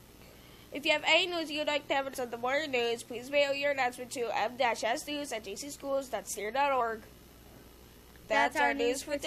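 Damaged data in the compressed stream, from 2.13 to 2.15 s: corrupted bytes leave the decoder unable to read those frames, so it loses sync and hunts for the next valid frame header. The result is a brief chirp or blip lasting about 20 ms.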